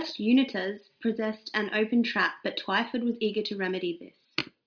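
No technical faults can be heard anywhere in this speech recording.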